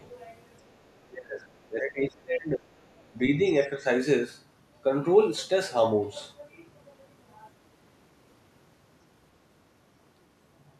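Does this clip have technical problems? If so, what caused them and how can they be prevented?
Yes. Between 0.96 and 2.7 s the speech dips sharply, by around 25 dB at its deepest and for most of that stretch, and again briefly from 3.1 to 3.4 s, less deeply, around 15 dB. This is likely speech suppressed in double talk: with both ends talking at once, the echo canceller could not tell this talker from loudspeaker echo and attenuated everything. Unlike packet-loss dropouts, these are level dips rather than abrupt digital gaps. A better-converged canceller with double-talk detection, or a headset to remove the echo path, prevents it.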